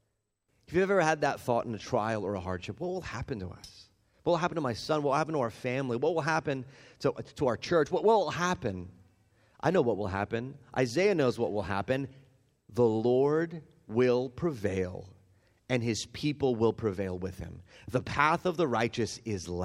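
A speech recording with no technical fault to point to anywhere in it. Nothing in the audio calls for a time, a cause or a fix.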